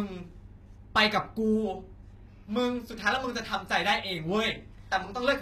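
From start to finish, the s sounds come out gritty and lispy over a treble that stays bright yet sounds copied, with nothing above 14.9 kHz. Unlike a plain low-pass or MP3 smearing, this fits likely HE-AAC compression at roughly 20 kbps, rebuilding highs by band replication.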